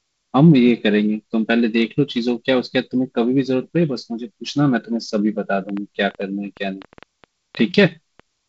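From 5.7 s to 8.2 s, a train of clicks ticks over the speech: around fifteen sharp pops at about 5.6 per second, unevenly spaced and peaking a few dB above the speech. This is likely interference or a faulty connection or power supply. The waveform shows them as narrow spikes, and the spectrogram as thin vertical lines reaching up to the G.722 band edge near 7.8 kHz.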